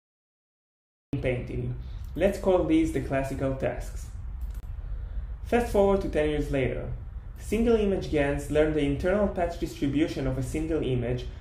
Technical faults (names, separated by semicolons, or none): cut-off start